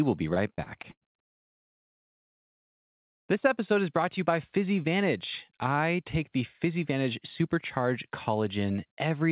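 From 0.34 s to 2.25 s, just after "will be", the speech breaks up with repeated packet loss (robotic sound). Packets go missing again and again, close to twenty separate holes, the longest about 120 ms. Each gap is papered over by extending the preceding audio, which accounts for roughly a third of this stretch, so the speech turns choppy, with fragments dropping out. The whole clip stops at 4 kHz, which fits a narrowband G.711 call path.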